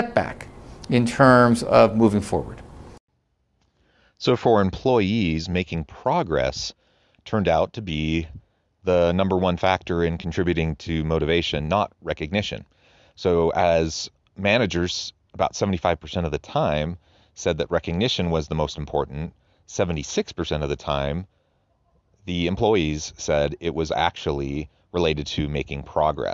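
No dropouts, clicks, distortion, level jumps or timing errors turn up anywhere in the recording.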